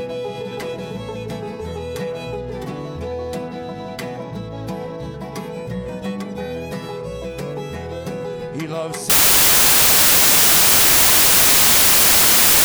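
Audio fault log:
9.10–12.64 s: samples built from the wrong bytes. From 9.10 s to the end of the clip, the bytes of each sample are put together in the wrong way, because the reader is shifted by a byte, has the order swapped, or expects a different alignment. The rapidly varying low-order bits end up as the most significant part of every value, so the sound turns into loud, harsh broadband noise, close to white on loud passages.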